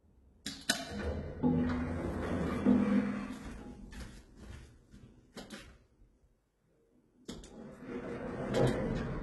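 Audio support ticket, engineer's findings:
Throughout: gritty, metallic treble on the sounds, with nothing above 11.8 kHz. Likely HE-AAC compression, with heavy damage that fits a very low bitrate near 16 kbps. Replicated upper bands, not the original, so harmonics misalign. Spectrogram: repeated, smeared high-band patches, hard ceiling.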